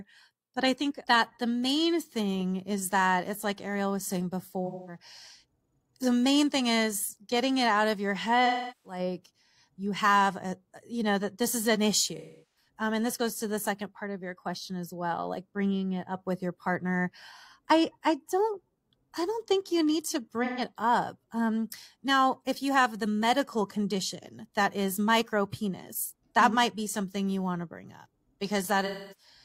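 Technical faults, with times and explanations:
4.66–4.97 s (after "like ariel was saying"), 8.46–8.99 s (after "it out of your"), 12.17–12.68 s, 20.44–20.61 s (after "think you need to"), 28.85–29.27 s: AAC frame loss with concealment. About 213, 384, 384, 128 and 256 ms of data go missing, which fits runs of three to nine lost frames. The decoder rebuilds each gap from the last good spectrum, so instead of the silence of a plain dropout you hear a smeared, noisy or phasey stand-in.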